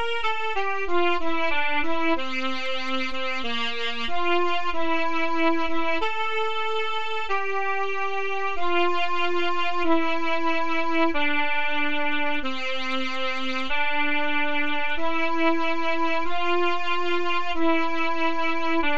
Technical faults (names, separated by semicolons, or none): none